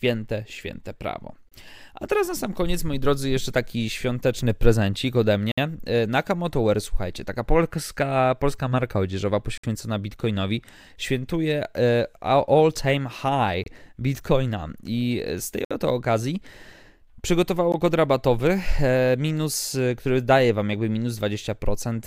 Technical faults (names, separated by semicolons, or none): gap between stream segments